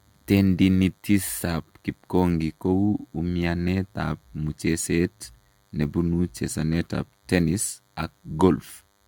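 A speech recording with two faults running through it from start to finish. The first is DECT cordless phone buzz. A thin, steady buzz sits under the speech, pitched at 100 Hz and rich in harmonics. It comes from a DECT handset or base station close by, sending a radio burst every 10 ms that the audio circuitry rectifies into sound. The buzz is quiet, roughly 40 dB below the speech, but it never stops. The second is generation loss. The speech sounds swirly, smeared and hollow, and consonant attacks blur. That is more damage than one pass at this quality should leave. Nothing is present above 17 kHz. The cause is likely repeated lossy re-encoding, perhaps around four passes. The character points to an AAC-LC chain at about 96 kbit/s. Each pass quantised on a shifted frame grid, so noise and spectral holes built up.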